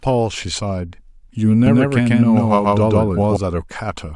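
From 1.66 to 3.36 s, the speech has a doubled audio track. A second, full-band copy trails about 150 ms behind at roughly equal level. It has no decay or room colour. It cuts in and out abruptly. A slower second capture path is the likely cause.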